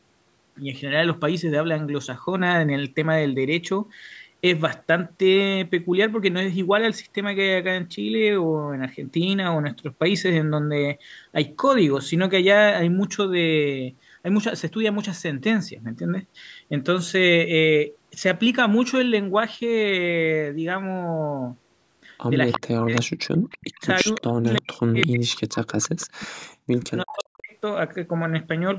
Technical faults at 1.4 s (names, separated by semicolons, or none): none